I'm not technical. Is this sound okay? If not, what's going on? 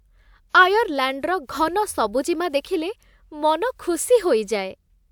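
Yes, this sound is okay, and nothing is going wrong in it.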